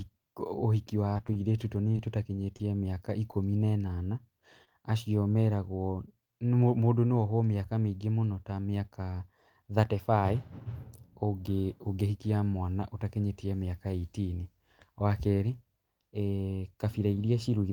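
From 1.13 to 1.96 s, repeated packet loss (robotic sound): six holes up to 19 ms, patched by extending prior speech, sound choppy, with smeared, repeated harmonic slivers on the spectrogram.

Scattered short gaps follow between 2.36 and 3.35 s: around five isolated holes of up to roughly 20 ms, filled from preceding audio, heard as brief ticks, visible as small discontinuities in the waveform.

At 4.65 to 4.68 s, a short concealed packet loss: about 20 ms never arrived and was filled by continuing the last sound, giving a momentary smear and a blurred vertical seam on the spectrogram.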